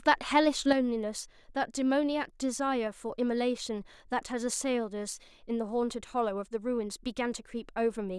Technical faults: sudden gain jump

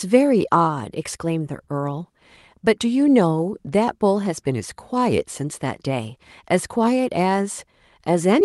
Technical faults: none

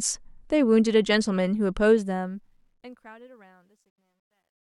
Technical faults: truncation distortion on a fade

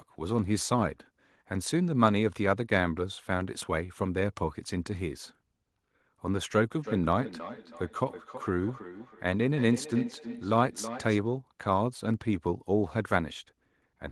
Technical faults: feedback echo between two devices

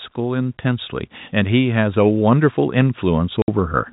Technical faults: automatic gain rising; packet loss filled with silence

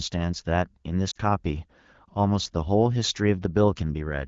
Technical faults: lost AMR speech frames

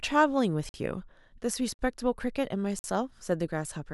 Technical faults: gap between chunks

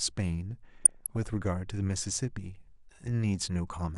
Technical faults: MP2 compression; DAB burbling

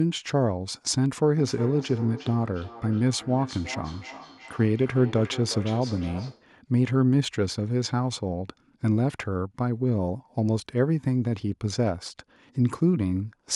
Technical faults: feedback echo between two devices

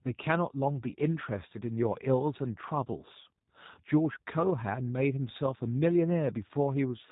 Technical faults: G.729 codec

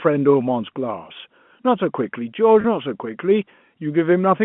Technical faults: packet loss with pitch repetition

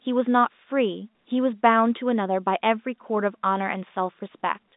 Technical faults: none

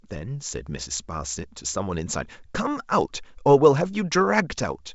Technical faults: none

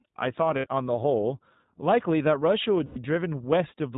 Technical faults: iLBC codec; lost iLBC frames

